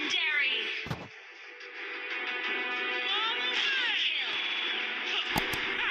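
At 4.43 s the audio stutters until 4.62 s. This is a repeated-frames fault. A short block of compressed audio, about 64 ms long, was delivered again, so the decoder played the same slice over. That block sounds three extra times in a row, which fits a run of two frames being resent. The result is a rapid, mechanical repetition of one fragment. The repeats stretch the audio by 192 ms, pushing everything after them later.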